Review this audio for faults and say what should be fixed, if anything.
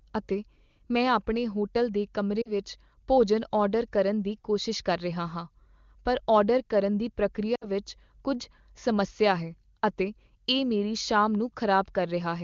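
Lost AMR speech frames at 2.42–2.52 s, before "ਭੋਜਨ ਆਰਡਰ ਕਰਨ ਦੀ", and 7.55–7.65 s, after "ਪਰ ਆਰਡਰ ਕਰਨ ਦੀ": the AMR-WB decoder concealed roughly 40 and 60 ms of missing audio by repeating the previous frame's parameters at falling gain, producing a brief smeared, fading dip. Prevent it by improving radio link quality or adding stronger channel protection so frames pass their checksum.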